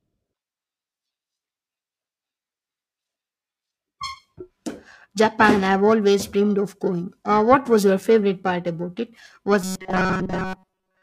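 Periodic clock jitter runs through the whole recording. A converter clock wobbling at about 1 kHz puts sidebands roughly 1 kHz either side of every speech component, giving a rough, metallic edge. On a spectrogram, parallel copies trail each harmonic and vanish during pauses.

From 9.62 s to the end at 11.03 s, the speech turns into robotic sound from repeated short buffers: a rigid 188 Hz buzz loosely tracking the syllables. The likely cause is late audio being covered by looping a segment of about 5.3 ms while most of the real signal is dropped. The waveform shows identical short cycles, and the spectrogram shows evenly spaced 188 Hz harmonics.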